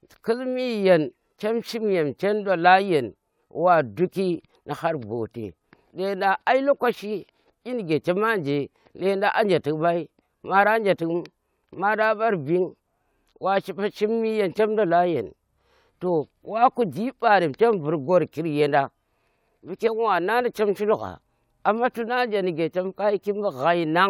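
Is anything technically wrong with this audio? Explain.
No, nothing technically wrong turns up anywhere in this speech recording.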